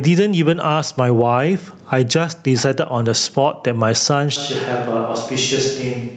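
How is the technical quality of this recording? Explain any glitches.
The recording has two clear problems: the level pumps throughout, and near the end the sound suddenly goes distant.

The gain pumping runs the whole length of the clip, with the level swinging something like 15 dB. The likely cause is input gain set far too high and a fast limiter or compressor clamping down on each peak and releasing in the gaps. That squeezes loud and quiet passages together, so the speech sounds flattened.

The switch to a distant microphone comes in abruptly at 4.36 s and lasts to the end. The speech drops by roughly 10 dB and turns roomy and hollow, with thinner low end. Room noise rises to only about 35 dB below the speech. That sudden change in character points to the close mic dropping out, with the recording likely falling back on something further away, such as a camera mic.

The audio also passed through a call link, so the top end stops around 8 kHz, which fits Opus at about 32 kbps.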